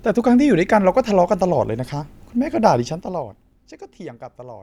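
A gain reduction in this speech recording was applied in coarse, unsmoothed increments of about 2 dB, producing zipper noise between 2.76 and 3.6 s. Each jump in level puts a small discontinuity into the waveform, and at roughly ten steps a second those clicks fuse into an audible ticking riding over the speech as it sinks by around 15 dB in total.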